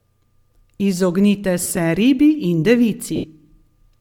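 Lost LE Audio frames at 1.63 s, where about 70 ms goes missing in short gaps scattered across 140 ms (the longest roughly 30 ms), and at 3.16 s, an 80 ms gap. The decoder refills each hole with recycled, sign-scrambled spectrum, so the speech briefly smears into noisy hiss.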